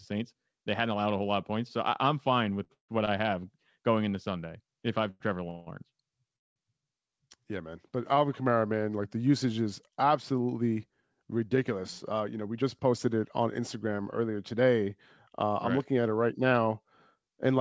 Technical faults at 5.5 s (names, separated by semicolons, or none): call audio freeze